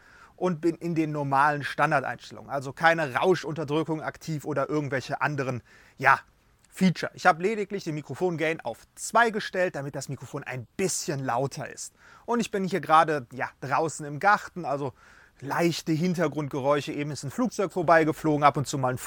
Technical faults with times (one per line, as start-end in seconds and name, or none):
17.83-19.07 sudden gain jump